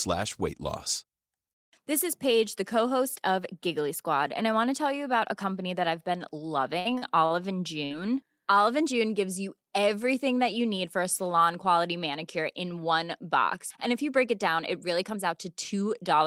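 A speech recording with three network-playback faults. From 6.79 to 7.47 s, just after "company that I've been", the sound turns choppy and robotic, with four short holes (the longest 56 ms) patched over so that about 27% of that stretch is synthetic fill. This is repeated packet loss, where data keeps going missing and the receiver keeps extending the last sound to cover each hole. At 7.85 to 7.93 s a brief smeared, fading patch replaces about 60 ms of audio, and the sound picks up further on. That is a burst of packet loss, with the lost stretch bridged by continuing and dimming the preceding sound. Finally, from 14.73 to 15.33 s, after "you break it down", the speech hurries to about 106% of normal speed at unchanged pitch. This is a jitter buffer speed-up, where the receiver trims around 40 ms of pitch-period slices to shed excess buffered delay.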